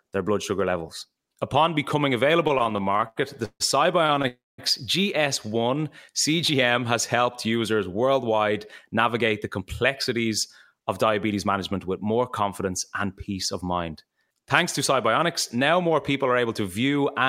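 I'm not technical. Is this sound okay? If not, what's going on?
No, it is not okay. The speech has several network-style glitches.

From 2.47 to 3.62 s there are repeated stalls (stutter). The sound catches and hangs about 13 times. The longest hang lasts 150 ms. About a third of that stretch is filler, not real speech. It happens because the audio arrived late or too slowly, so the player kept stretching the last sound while it waited. A shorter bout follows at 4.06 to 4.25 s, with four tiny hangs. No speech is lost. It just drags and jerks.

Right after, from 4.27 to 4.60 s, comes a call audio freeze. The sound holds for about 0.31 s, and most of that, about 0.21 s, is silence. The likely cause is that a chunk of audio was held up on its way. The player had nothing to play, so it paused. When the audio arrived, the speech picked up where it stopped. Nothing is missing, but a gap was inserted.

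From 5.63 to 6.11 s there is a jitter buffer slow-down. The speech plays at about 92% speed, and 46 ms of extra sound is added. The player did this to build up a small reserve, either because it was running low or because it had just decided to hold more audio in hand. It repeats tiny slices of the sound, so the pitch stays the same. You may notice slightly drawn-out sounds.

There are two patches of jitter buffer speed-up. The first runs from 8.03 to 11.79 s, after "has helped users" and before "with more confidence and". The speech runs about 7% fast there. Roughly a third of a second is trimmed away. The second runs from 15.55 to 16.46 s, about 8% fast, losing roughly a tenth of a second. The player had too much audio waiting and cut tiny slices to catch up. The pitch stays the same, but the speech sounds slightly hurried.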